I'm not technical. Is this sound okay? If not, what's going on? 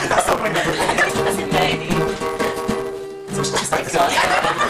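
No. Throughout, a steady buzz at about 172 Hz sits under the audio, which rushes by roughly 1.88 times too fast yet keeps its normal pitch. That is a block size mismatch (truncated). One stage passes on longer chunks than the next accepts, consistent with 256-sample reads, so each chunk's end is dropped. Playback at the wrong sample rate would also raise the pitch.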